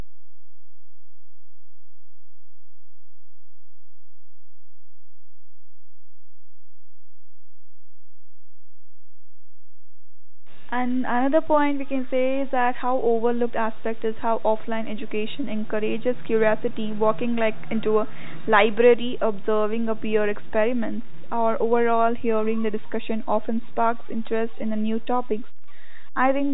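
From start to finish the speech waveform carries a DC offset: the whole signal is displaced from zero by a constant amount rather than swinging evenly about the centre line. There is no audible tone from it. It shows up instead as steady energy at 0 Hz, and it eats into headroom on one side, so peaks in that direction reach full scale sooner. The telephone band limit near 3.8 kHz sits on top of this, unaffected.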